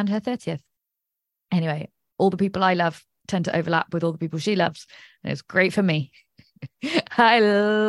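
No technical faults are audible.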